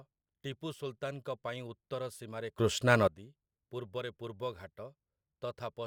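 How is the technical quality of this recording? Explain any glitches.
There's one clear glitch in this speech recording: a sudden gain jump from about 2.58 s to 3.08 s, right after "ପାଇଁ ଉତ୍ତର ସୀମାରେ". The level leaps up by about 17 dB and drops back half a second later, and the background noise rises and falls right along with the voice. That step from one sample to the next, with no ramp, most likely comes from a digital gain setting or bit shift being applied abruptly.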